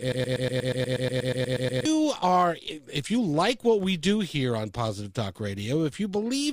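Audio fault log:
0.00–1.85 s broken-record loop: already running as the clip opens, one 120 ms speech fragment repeats identically, back to back, 14 times, likely from a stalled player or stream resending its last fragment. Unlike echo, the repeats never fade, and the speech due then is lost.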